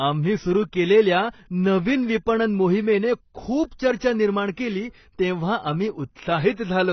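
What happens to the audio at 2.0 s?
At 2.0 s, as across the whole clip, the speech has likely passed through heavy AAC compression, with damage that points to a starved bitrate around 16 kbps. Nothing survives above 6 kHz, so it sounds dull and smeared, with fizzy, warbling sibilants.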